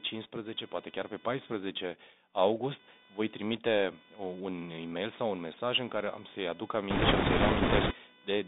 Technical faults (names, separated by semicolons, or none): computer activity noise; Bluetooth CVSD headset codec; bit errors on a Bluetooth voice link